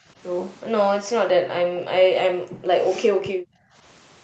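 Right at the start, 0.0 to 0.17 s, the speech dips by about 10 dB, then it really drops out between 1.2 and 2.04 s, sinking by around 30 dB, again from 2.26 to 2.74 s at about 20 dB, and from 3.09 to 3.84 s at about 25 dB. That choppy ducking is likely speech suppressed in double talk: the echo canceller mistook this talker for loudspeaker echo while the far side spoke and pulled the level down.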